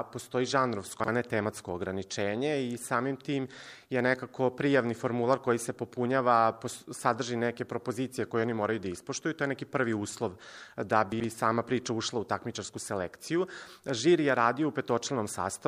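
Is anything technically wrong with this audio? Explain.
Yes. Chunks out of order occur at 1.00 to 1.08 s and 11.12 to 11.24 s. A 40 ms chunk played one chunk late, then two chunks late, so the audio is briefly jumbled, with three hard joins in each spot where mismatched edges meet.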